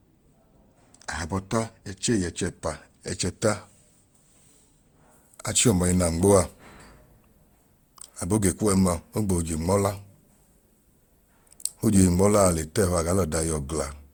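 Channel delay (comb filtering) runs from 0.0 to 5.12 s, ending just before "achi ọma ẹnaa nmoaa". One channel arrives roughly two samples late, and summing to mono cancels shared content at fixed notches, the first near 10 kHz, leaving the top end dull.

Generation loss affects the whole speech clip, likely from repeated Opus encoding at 64 kbit/s, around seven passes. Each pass requantises on a shifted frame grid, so noise accumulates, giving a swirly, hollow, smeared sound with blurred attacks, despite content reaching 20.2 kHz.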